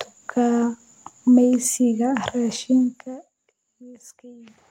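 A speech clip in which a level drop of roughly 25 dB between 2.76 and 3.34 s is applied in coarse, unsmoothed steps at roughly a hundred per second, causing zipper noise: a fine ticking buzz riding on the voice while it fades.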